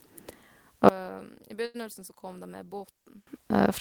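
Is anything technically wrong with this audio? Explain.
Yes, there are two problems. From 0.89 s to 3.27 s the speech suddenly drops by about 25 dB and turns faint and distant, then comes back to full level. That's the classic signature of one channel inverted, likely from one side of the stereo pair having its polarity flipped before the signal got folded down to mono. The centred speech in both channels cancels out, so what you hear is just the small difference between them, a faint ghost of the voice.

Inside that stretch, from 1.65 s to 1.76 s, there's a short stall from a late packet. A chunk of audio didn't show up on time, the jitter buffer ran dry, and the receiver held the last bit of sound for about 89 ms until the data arrived. Then it picked up right where it had left off, so nothing is actually lost. Everything after it just runs about 89 ms late. You hear it as a brief unnatural hold on the sound, with a slight buzz or dip.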